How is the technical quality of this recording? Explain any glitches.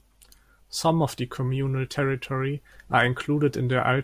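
No glitches can be heard anywhere in this recording.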